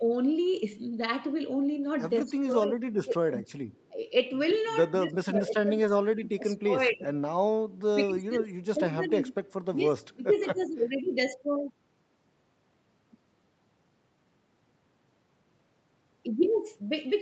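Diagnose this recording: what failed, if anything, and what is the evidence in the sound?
Speech suppressed in double talk, at the call-processing stage: the level sinks by about 20 dB at 2.24–3.47 s, 7.94–9.24 s and 9.73–10.85 s, about 10 dB at 3.90–3.99 s, and about 30 dB at 4.97–7.14 s. The likely cause is the echo canceller ducking near-end sound while the far end also talked. Unlike packet loss, the dips last long.

Echo leak, also in call processing: a faint copy trails the sound by 180 ms at 3.48–3.91 s (about 35 dB down), 4.48–4.59 s (about 25 dB down) and 10.59–10.64 s (about 30 dB down). Residual loudspeaker pickup likely escaped cancellation. The fixed delay distinguishes it from room reverberation.

Lost packet rebuilt from error correction, at the network stage: at 5.87–5.89 s and 8.75–8.77 s, one 20 ms stretch each sounds briefly rougher and noisier, with no gap. The Opus decoder played the low-bitrate copy carried in the following packet. 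That gapless, grainy texture sets it apart from concealment or a dropout.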